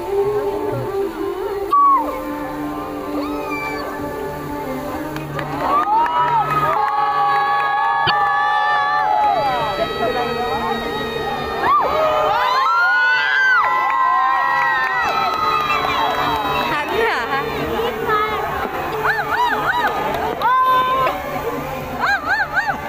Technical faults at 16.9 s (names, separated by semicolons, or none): none